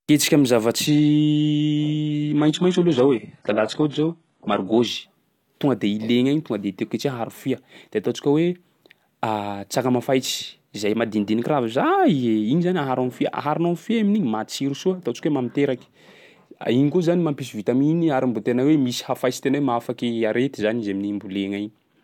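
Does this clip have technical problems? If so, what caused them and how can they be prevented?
Yes. From 0.87 to 4.87 s the speech abruptly turns dull and synthetic, with nothing above about 11.4 kHz and a smeary, artefact-laden top end, then snaps back to full clarity with no gap either side. That is an adaptive stream at a lower bitrate: the player briefly switched to a much leaner version when the connection slowed, and the rebuilt, hollow-sounding treble fits a very low-bitrate HE-AAC encoding. Preventing it means giving the stream more network headroom or a larger playback buffer, or setting a higher minimum bitrate rung for the adaptive ladder.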